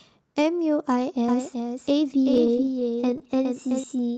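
A speech recording carries a doubled audio track from 1.28 to 3.84 s: a second, full-band copy runs about 0.4 s behind at roughly 5 dB lower, likely from a second capture path or a misaligned edit. Unlike an echo or room reverb, it has no decay or added colour, and it switches on and off abruptly. From 2.23 to 3.27 s there are repeated stalls (stutter): the sound keeps hanging for moments up to 25 ms long as the last audio is stretched to fill late arrivals, about 170 ms in total. This sets it apart from dropouts, because nothing is lost; the speech just drags. The whole clip passed through a call path using Opus at around 32 kbps, with an 8 kHz top end.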